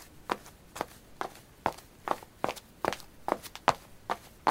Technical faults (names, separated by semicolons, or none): audio read two samples at a time (double speed)